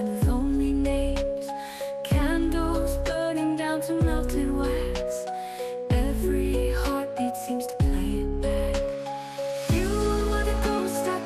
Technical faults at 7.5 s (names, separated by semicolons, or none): MP2 compression